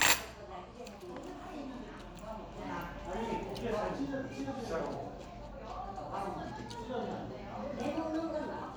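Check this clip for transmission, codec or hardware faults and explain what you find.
Nothing here points to a transmission, codec or hardware problem; the audio comes through without any glitch, dropout or distortion worth flagging.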